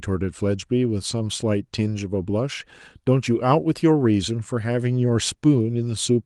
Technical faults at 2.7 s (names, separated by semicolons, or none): none